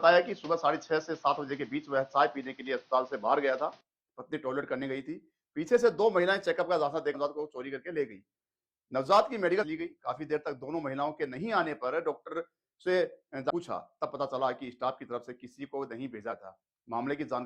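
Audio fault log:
0.00–3.81 s, input switched to a poorer device: the opening sounds narrower, with nothing above 6.5 kHz and its own noise floor around 35 dB under the signal. At 3.81 s the tone clears with no gap and the level shifts by around 5 dB, likely a switch back from a lesser microphone or headset profile.
7.10–7.15 s, 9.58–9.64 s, 13.46–13.51 s, 16.28–16.33 s, damaged data in a compressed stream: four brief disruptions, each roughly 50 ms. Corrupted frames there leave the decoder misreading data and hunting for the next valid frame header, which produces a short burst of broken sound or a brief dropout.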